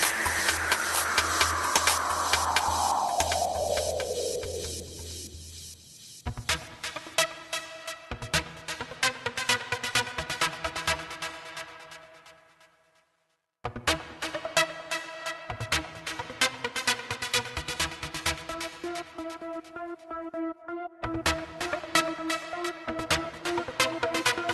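At 3.01 s the sound jumps abruptly forward with no gap, and about 0.4 s is missing: a skip ahead, where a stretch was dropped while later audio was already queued. From 3.6 to 4.5 s the sound runs hurried at about 106% speed but keeps its pitch. This is a jitter buffer speed-up, where the receiver trimmed roughly 50 ms of pitch-period pieces to shed excess buffered delay. All of this passed through an Opus call path that cuts off above 12 kHz.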